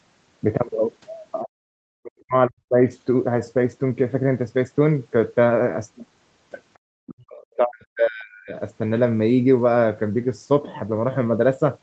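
Speech clip with the talker's level collapsing twice, from 1.82 to 2.88 s and from 6.94 to 8.55 s, falling by around 40 dB in places. This is likely speech suppressed in double talk, where an echo canceller cannot separate the near talker from overlapping far-end echo and attenuates both.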